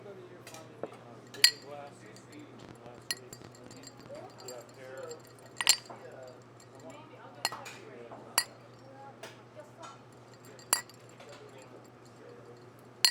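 Likely interference from nearby equipment or a faulty connection injects a train of clicks from 2.63 to 4.17 s: around fifteen similar pulses at about 10.5 per second, unevenly spaced, heard as uneven ticking that pokes roughly 10 dB above the audio.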